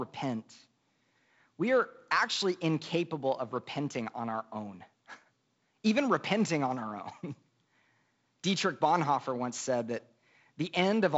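No technical faults can be heard in this speech clip.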